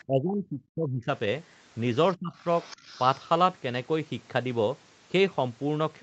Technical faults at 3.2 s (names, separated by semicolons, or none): other side's voice leaking through